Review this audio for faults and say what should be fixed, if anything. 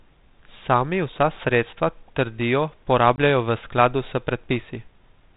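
Packet loss on an ADPCM call at 3.16 to 3.18 s, just after "vsa sredstva trdijo": about 20 ms of the speech, roughly one packet, drops out and is filled with silence, leaving a hard-edged hole. Because this G.726 ADPCM link at 32 kbit/s sends only differences from an adaptive prediction, the receiver's predictor and step size lose track of the sender's, so the speech comes back slightly distorted and settles within tens of milliseconds. To prevent it, use a jitter buffer with packet-loss concealment and reset or resynchronise the decoder state after a gap.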